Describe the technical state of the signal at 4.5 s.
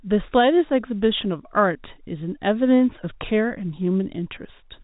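At 4.5 s the speech is intact, carried through G.711 telephone coding that passes nothing above about 3.8 kHz.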